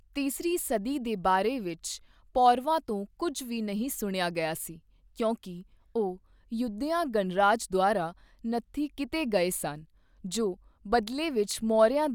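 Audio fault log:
No faults detected in this speech recording.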